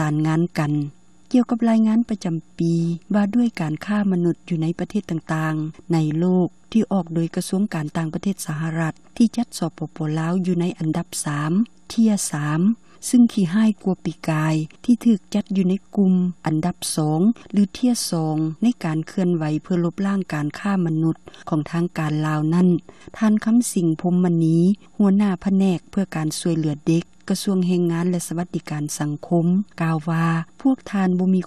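No technical faults can be heard anywhere in the recording. Nothing in the audio stands out as a problem worth pointing out.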